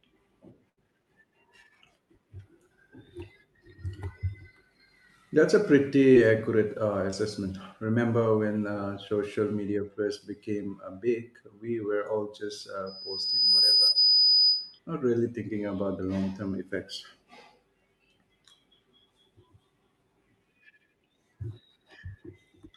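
Between 0.69 and 0.79 s, a burst of packet loss left about 80 ms of speech undelivered. The receiver stretched the last sound across roughly 74 ms, fading it out, so a brief held buzz or dying hiss replaces the missing stretch before the speech picks up further along.

Short concealed packet loss follows at 6.13 to 6.16 s and 7.10 to 7.14 s: about 20 ms missed the decoder each time, and the receiver extrapolated the preceding sound before blending back in, leaving a quick smear or wobble.

From 12.86 to 14.79 s, the microphone picks up its own loudspeaker, producing loudspeaker feedback squeal. The loop's gain passes unity at 5 kHz, so that tone swells over roughly 0.7 s into a squeal around 10 dB above the speech. Inside it, at 13.86 to 13.90 s, another short concealed loss adds a momentary wobble.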